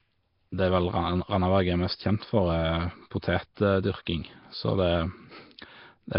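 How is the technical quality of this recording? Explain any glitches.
The recording has poor technical quality, with heavy codec damage throughout and one brief glitch.

Throughout, a likely Nellymoser compression stage, at a bitrate that sounds around 22 kbps, starves weak bands and fills them with noise, leaving speech rough, hissy and underwater-sounding, with nothing above 5.3 kHz.

From 3.55 to 3.57 s, pre-echo occurs: the codec spreads block-wide quantisation noise ahead of a sharp attack, so about 24 ms of hiss precedes it and the onset sounds smeared.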